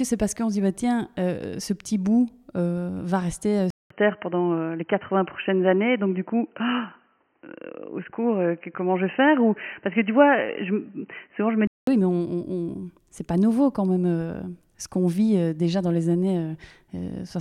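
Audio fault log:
3.70–11.87 s, input switched to a poorer device: after "euh va rester euh", a 200 ms gap, then dull, boxy sound with nothing above 3.1 kHz and new noise about 50 dB down, level unchanged; full band returns at "oui mais". Likely cause: narrower-band microphone taking over.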